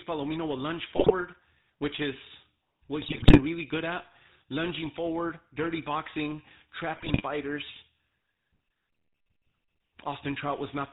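A speech clip carried end to end through the GSM full-rate codec, with plainly audible coding damage. The voice has the buzzy, gravelly roughness of that codec, which fits 13 kbps full rate. It models the vocal tract and excites it with a sparse, regularly spaced pulse train, so harmonics come out coarse and grainy. On a spectrogram everything stops sharply at 4 kHz, with empty space above, and the harmonic stripes below look smeared and speckled. GSM bit errors break in three times: from 0.96 to 1.12 s just after "will lunge", from 3.02 to 3.4 s between "which is what" and "really good at lunging", and from 6.96 to 7.23 s after "lunging forward dirty boxing". Corrupted filter, pitch and gain values make the decoder squawk, pop and gargle for 7 to 17 frames at a time. The waveform shows sudden level spikes, and the spectrogram shows blotchy, misplaced energy bands in those spans.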